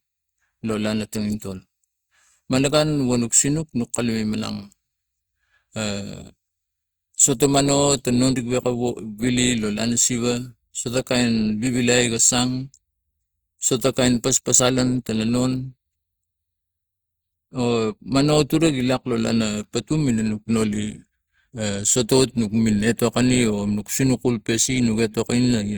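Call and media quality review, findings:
Hard clipping, 22.13 to 22.22 s: short crackle on a speech peak, about 90 ms. Probably input gain or the converter, pushed roughly 2 dB over full scale, so the peak tops get sheared flat and spray harmonics up high. Mild overload, so it's a brief crunch rather than sustained fuzz. Worth trimming gain a few dB.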